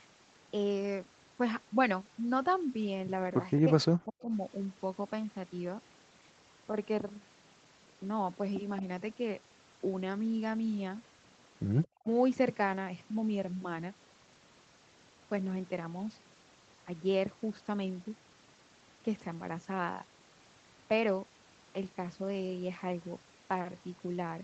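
Speech suppressed in double talk occurs from 3.63 to 4.31 s and again from 11.97 to 12.06 s in this speech clip: the voice dips by up to about 40 dB, for roughly half a second in the first instance. The likely cause is an echo canceller turning down both talkers while they overlap. An echo leak appears from 11.83 to 11.88 s as a faint copy of the voice, around 30 dB below it and delayed by 223 ms, consistent with residual loudspeaker echo getting back through.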